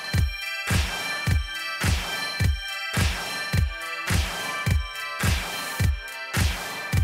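From start to finish, a channel delay (doubling) puts a second copy of the sound about 43 ms behind the first, at equal level, which fits one channel lagging by a 2048-sample buffer before the mono sum. It is one distinct slap, not a decaying reverb tail or a hollow comb-filter tone.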